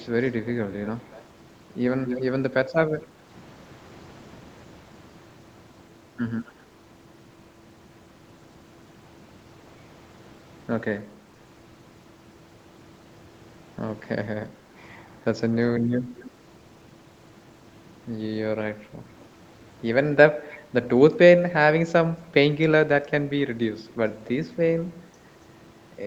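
This is a speech recording with an echo leak: a faint delayed copy of the voice, about 250 ms late, appears at 0–1.23, 2.05–2.25, 6.45–6.53, 16.16–16.3, 19.2–19.25 and 20.5–20.57 s, mostly well below the speech, though much stronger around 2.1 s. The distinct delay distinguishes it from room reverberation. The likely cause is a loudspeaker call whose echo canceller let residue through.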